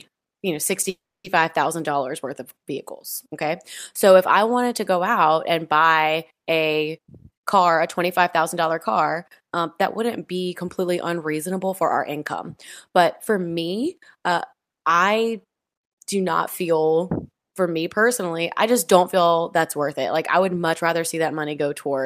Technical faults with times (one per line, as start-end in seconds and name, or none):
0.89-1.26 call audio freeze
6.94-9.67 jitter buffer speed-up